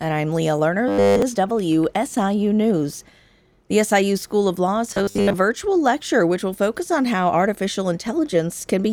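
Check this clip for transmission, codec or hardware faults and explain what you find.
The speech is twice interrupted by robotic sound from repeated short buffers, from 0.88 to 1.22 s and from 4.91 to 5.35 s. The likely cause is fresh audio arriving too seldom, so playback loops a fragment of about 10 ms instead of the real signal, replacing essentially all of the first stretch and most of the second. That loop imposes a fixed 100 Hz buzz, making the voice a rigid metallic buzz that still loosely follows the words.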